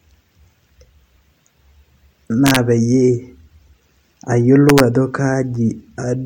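Gain pushed about 1 dB past the integer limit wraps samples to the opposite sign, an integer overflow giving violent cracks in the speech at 2.47–2.56 s and 4.69–4.80 s.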